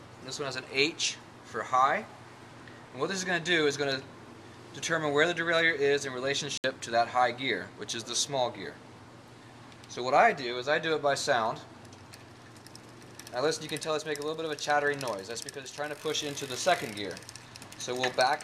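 At 6.58 s the sound cuts out abruptly and returns at 6.64 s. This is a digital broadcast dropout. The receiver got no usable frames and muted. A hole of about 64 ms fits two lost frames, and that content is gone.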